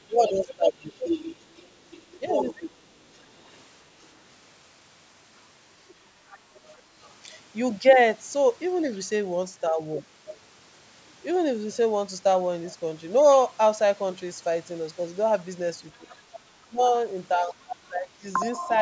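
Speech recorded through a call's microphone processing, with nothing above 8 kHz. The talker's speech is suppressed in double talk at 0.07–0.96 s, 2.19–2.72 s and 15.98–18.25 s, dipping by roughly 15 to 20 dB. This is likely the echo canceller turning down both voices at once. The other side's voice leaks through at 0.1–4.06 s, 5.88–7.14 s, 8.93–8.98 s, 15.96–16.39 s and 18.73–18.78 s, at roughly 10 to 35 dB below the speech. This is likely loudspeaker echo left in the microphone signal.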